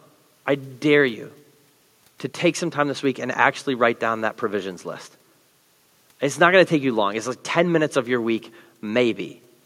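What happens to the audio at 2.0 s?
Nothing goes wrong at 2.0 s: the speech plays through intact, with only the room's own background noise sitting about 45 dB below it.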